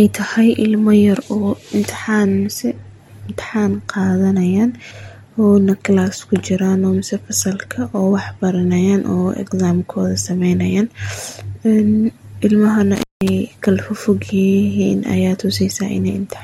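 At 12.96 s the speech is interrupted by an intermittent contact that lasts until 13.29 s. A loose cable or plug briefly loses connection, and the signal path stays open for about 0.18 s of that span. The speech drops out or breaks up, with crackle where the connection breaks and remakes. On a waveform this shows as a sudden collapse in amplitude, bounded by sharp spikes. A spectrogram shows the speech energy vanishing, framed by thin vertical broadband streaks.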